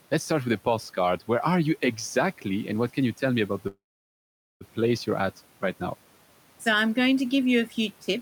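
From 3.67 to 4.64 s there's a call audio freeze. The sound trails into 0.82 s of silence, likely from late packets, then picks up intact, 0.93 s behind.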